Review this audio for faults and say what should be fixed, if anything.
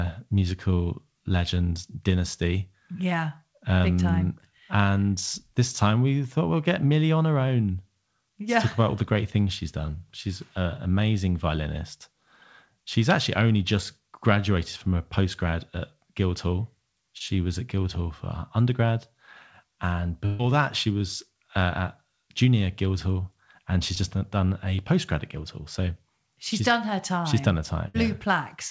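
Short concealed packet loss at 17.18–17.22 s and 23.95–23.98 s: about 20 ms missing each time, bridged by extrapolated sound, visible as a brief smeared patch in the spectrogram.

Burst of packet loss at 20.26–20.41 s (130 ms filled, 140 ms missing) and 27.88–27.96 s (about 60 ms): the last sound is held and faded, showing as flat, decaying harmonics or noise.

Both faults sit on a G.722 call path that carries nothing above 8 kHz, and they would be prevented by a more stable network link with a larger jitter buffer or forward error correction.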